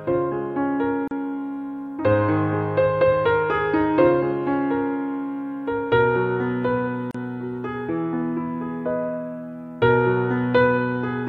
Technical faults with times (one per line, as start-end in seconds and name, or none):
1.08-1.11 gap at a join of encoded pieces
7.11-7.14 gap at a join of encoded pieces